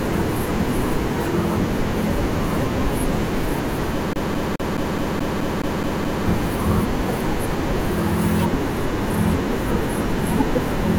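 A spoken-word recording that locks into a rapid, even stutter from 4.13 s to 6.26 s: the same 0.21 s fragment of speech plays ten times in a row, with a brief dropout at every restart, before the sound moves on. This is the classic CD stuck on one turn. A scratch sends the laser back one track at the same point on each revolution, so the player keeps rereading that short stretch of disc.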